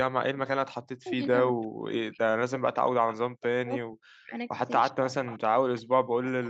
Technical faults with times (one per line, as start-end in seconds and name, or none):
0.84-5.02 speech suppressed in double talk
3.12-3.16 echo leak
5.09-5.39 echo leak
5.50-6.49 speech suppressed in double talk
6.44-6.49 echo leak